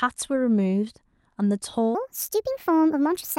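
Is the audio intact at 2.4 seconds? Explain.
No. A section at the wrong speed runs from 1.95 s to 3.39 s, most likely from the audio being played against the wrong clock. It runs 1.42 times too fast, so the speech turns hurried and rises roughly seven semitones in pitch.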